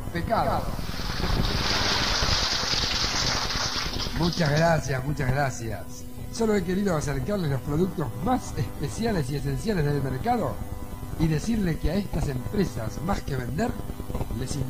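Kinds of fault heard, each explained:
Doubled audio track: a second, slower capture path likely mixed the same signal in again, so from 0.43 to 2.13 s a full-band copy trails the original by roughly 150 ms, about 5 dB quieter, with no decay, starting and stopping abruptly.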